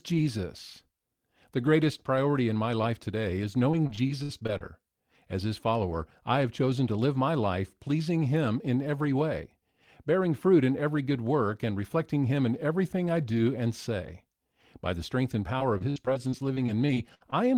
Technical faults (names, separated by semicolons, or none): repeated packet loss (robotic sound)